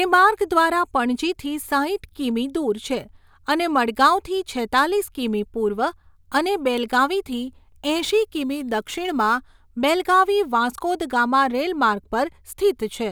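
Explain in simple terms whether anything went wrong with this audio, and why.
Something did go wrong, between 7.37 and 9.44 seconds. There the speech picks up a gritty, buzzing fizz. It sits on top of the louder and brighter sounds. This is crude rate conversion. The audio was switched to a new sample rate, which fits a change from 48 kHz to 44.1 kHz. It was done the cheap way, by simply dropping samples, with no smoothing filter. The gaps repeat in a fixed pattern. That pattern creates stray tones that don't belong to the speech.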